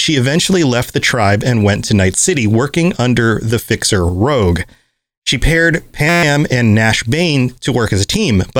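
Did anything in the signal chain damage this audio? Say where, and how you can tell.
Yes. From 6.09 to 6.23 s the speech turns into a steady 172 Hz buzz, one 5.8 ms fragment repeated 24 times. This is a system hang loop at the driver or buffer stage. The host froze while the hardware kept replaying one ring buffer, which fits a 256-sample buffer. Around 150 ms of audio is lost.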